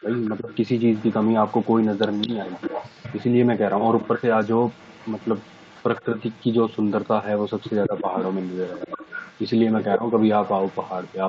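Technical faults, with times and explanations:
0.0 to 7.04 s and 7.38 to 11.28 s, echo leak: a faint delayed copy of the speech trails it, about 200 ms behind. It sits about 20 dB below the speech at first, then about 15 dB below. A loudspeaker's echo likely slipped past the far end's echo canceller.
0.4 to 0.5 s, 2.25 to 2.33 s, 6.05 to 6.17 s, 7.88 to 8.08 s and 9.98 to 10.03 s, speech suppressed in double talk: the speech briefly dips, by roughly 10 dB, and by only about 5 dB at 6.05 s. Each dip lasts under a fifth of a second. The echo canceller likely mistook overlapping talk for echo and turned both down.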